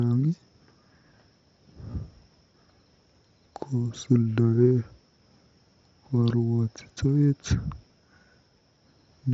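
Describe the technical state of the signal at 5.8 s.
At 5.82 s, concealed Bluetooth headset packet loss drops about 15 ms of audio, consistent with two lost frames; the receiver patches the gap with repeated recent waveform, leaving a buzzy blip.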